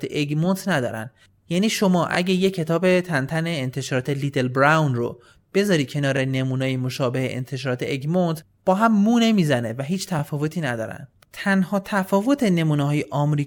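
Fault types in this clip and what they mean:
Overlapping chunks: The audio was processed in blocks of 4.0 s. Each new block starts slightly before the previous one ends. So 21.33 ms of sound is played twice at the join. In this speech clip it happens twice, at 2.15 to 2.17 s and at 6.17 to 6.19 s. Each join is heard as a brief click or stutter. The two events are 4 s apart, matching the block length.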